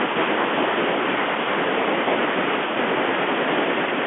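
Bluetooth CVSD headset codec damage runs through the whole clip. Each sample is coded as a single up-or-down step whose size adapts, which fits a 64 kbps link. The speech sits in a 250 Hz to 3.4 kHz band with nothing above 3.7 kHz. Loud high sounds outrun the step and distort, s sounds turn scratchy, and a granular hiss lies underneath.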